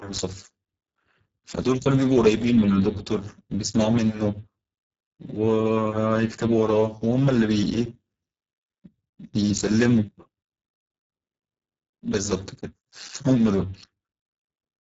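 Speech running the whole clip is heavily damaged by the Speex codec at a very low setting, consistent with roughly 6 kbps. The CELP coder starves the excitation, so speech sounds hoarse and noisy. A spectrogram shows smeared harmonics.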